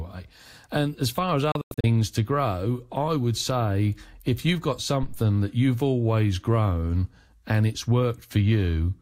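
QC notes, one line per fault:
1.52–1.84 s, digital broadcast dropout: the receiver mutes in a few short holes adding up to 192 ms across 320 ms, the longest 96 ms, each with a quick 3 ms fade. That pattern points to several corrupt frames, and whatever was sent in those gaps is gone.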